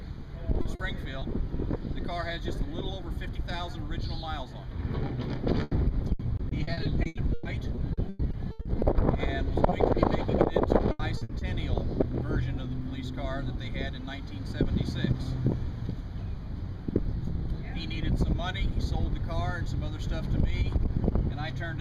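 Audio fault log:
0.61 s to 1.23 s, short concealed packet loss: Three brief dropouts, at 0.61 s and 0.75 s (about 40 ms each) and 1.19 s (about 20 ms), never arrived in time. The receiver extended the preceding sound across each hole and blended back, leaving small smears or wobbles where that audio is missing.
5.63 s to 5.73 s, burst of packet loss: About 80 ms in a row was lost. The receiver kept the last sound going and faded it as the gap lengthened, heard as a held buzz or dying hiss, then the audio resumes with that stretch skipped.
6.13 s to 8.83 s, repeated packet loss (robotic sound): Sixteen separate holes totalling 740 ms, the longest 120 ms, fill about 27% of this span. Each gap is patched by continuing the last sound, and the next follows quickly, so the audio turns choppy, with pieces gone.
9.69 s, short concealed packet loss: A 20 ms gap was bridged by stretching the sound just before it, then crossfading into the real signal. 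This causes a momentary smear or wobble, and those 20 ms of audio are lost.
10.91 s to 11.43 s, repeated packet loss (robotic sound): Four gaps totalling 200 ms, the longest 80 ms, cover about 38% of this stretch. Each is filled by extending the previous sound before the next arrives, giving a short burst of choppy texture with content missing.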